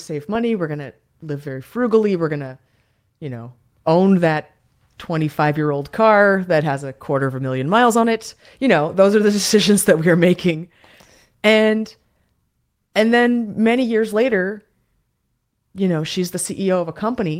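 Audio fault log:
throughout: clock drift between sender and receiver. The sending clock runs roughly 5 percent faster than the receiving clock, so the jitter buffer keeps filling with surplus audio. The receiver must keep discarding material to stay in step, leaving faint recurring timing hiccups in the speech.
0.11–17.36 s: repeated timing corrections. To absorb the incoming stream at 105 percent of its nominal rate, the receiver repeatedly cuts short pieces out of the speech. The cuts all go the same way but are unevenly spaced, heard as slight skips and an unsteady tempo.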